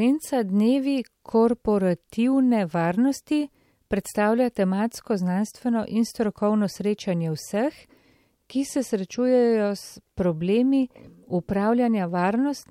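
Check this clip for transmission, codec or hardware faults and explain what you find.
Two brief faults, both dropped samples, at 10.83 s and 12.09 s in the speech. A handful of samples, a fraction of a millisecond, most likely went missing from the stream at each point, so the waveform leaps straight from one value to a later one. No sound is lost, but the sudden step makes a single sharp click each time, which shows in a spectrogram as a thin vertical line running across all frequencies.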